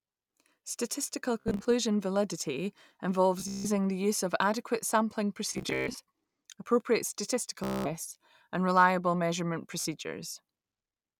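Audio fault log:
1.41–1.66 s, 3.40–3.70 s, 5.53–6.00 s, 7.64–7.94 s, 9.80–9.86 s: Bluetooth stutter. Packets arrive late or are lost. The receiver replays short slices, causing a machine-gun buzz. The sound then resumes further on.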